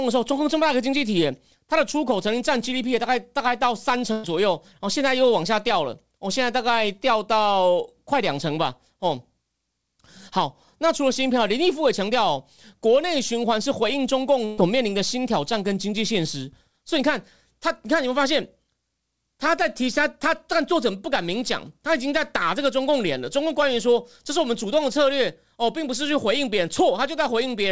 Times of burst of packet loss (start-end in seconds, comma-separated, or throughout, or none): 4.12-4.25, 14.45-14.59